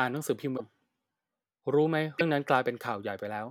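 Speech, with two brief glitches where the sound skips ahead, at 0.56 to 0.61 s and 2.18 to 2.22 s, each about one or two 26 ms frames long. This is likely a broken MP3 bit reservoir after frames were cut. Unlike a plain dropout, the sound jumps forward rather than pausing.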